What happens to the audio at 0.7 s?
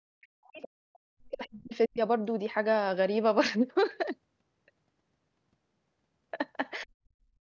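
At 0.7 s the talker's voice is ducked, with the deepest drop roughly 40 dB, and this speech suppressed in double talk runs from the start to 0.86 s. The likely cause is an echo canceller that, with both sides talking at once, couldn't separate the talker from the loudspeaker echo and pulled both down.

Just before that, from 0.62 to 0.68 s, a brief scrap of the other side's voice leaks through, faint at around 20 dB below the speech. It's likely residual loudspeaker echo that the canceller failed to remove from the microphone signal.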